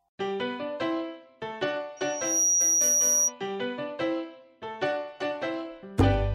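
From 1.97 to 3.33 s, a loudspeaker feedback squeal rings at 5.8 kHz. The microphone is re-amplifying its own loudspeaker, so that one frequency builds over under half a second to about 5 dB above the sound. A spectrogram shows a single bright horizontal line, and the waveform shows a swelling envelope.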